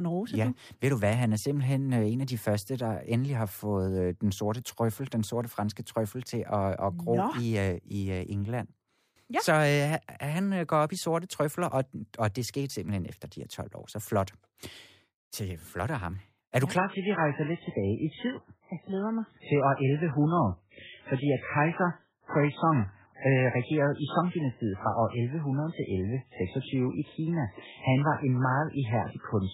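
At 16.77 s the adaptive stream drops to a lower bitrate, consistent with 8 kbit/s: abruptly, with no gap, nothing survives above 3.8 kHz and artefacts thicken.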